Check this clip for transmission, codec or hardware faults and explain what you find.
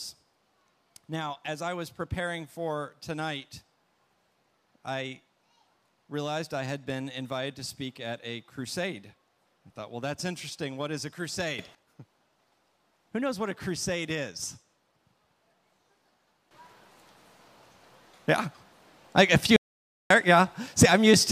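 Three faults are present: two sudden gain jumps and one dropout to silence.

Sudden gain jump: at 11.59 s the level rises by about 12 dB and falls back at 11.75 s. At 16.51 s it rises by about 13 dB and stays there to the end. Sound and background noise step up together, likely from a gain change applied without a ramp.

Audio dropout to silence: from 19.56 to 20.10 s, about 0.54 s, the audio cuts to silence with no room tone, then resumes mid-flow. This is likely lost input, with the recorder writing silence until the signal returned.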